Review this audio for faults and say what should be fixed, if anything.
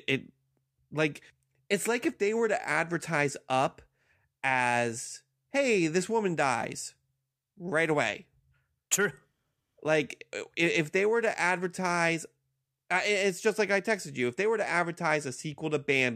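No faults found; nothing needs fixing.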